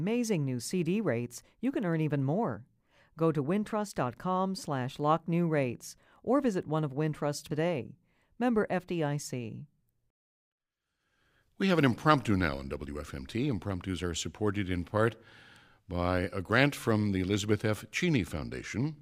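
At 7.50 s the speech jumps ahead with a brief blip, a stream segment skipped, likely; the waveform shows an abrupt discontinuity and the spectrogram a thin vertical click.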